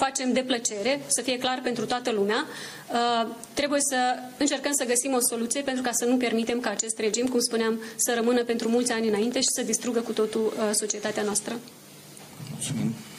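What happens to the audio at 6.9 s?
A train of clicks runs from 6.43 to 9.49 s, so 6.9 s falls inside it. About 4.9 sharp pulses per second arrive at an irregular pace, some fifteen in all, each peaking around 5 dB above the audio. The likely cause is electrical interference or a faulty connection or power supply.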